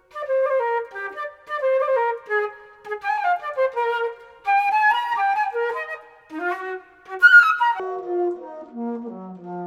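From 7.80 s to the end, a section at the wrong speed plays at half speed, sinking around ten semitones and dragging, likely a playback or editing clock mismatch.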